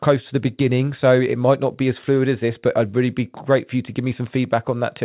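Nothing goes wrong anywhere in this speech, and the fact that nothing sits above 4 kHz just reflects the call path it came through, which sounds like a G.711 mu-law link at 64 kbps.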